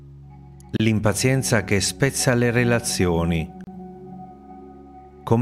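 Two gaps at joins of encoded pieces interrupt the sound: one at 0.77 s lasting about 32 ms, another at 3.64 s lasting about 31 ms. Separately encoded segments were butted together untrimmed, so encoder start delay and end padding remain as brief silences with slightly smeared edges, after which the sound resumes where it stopped.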